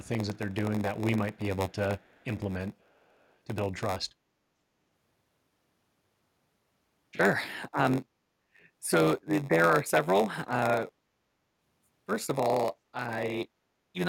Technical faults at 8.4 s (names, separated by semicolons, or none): block size mismatch (padded)